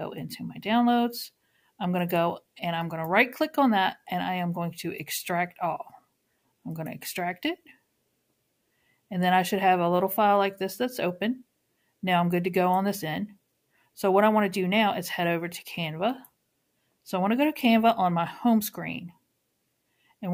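No technical fault can be heard anywhere in the audio, and the signal stays intact and steady throughout.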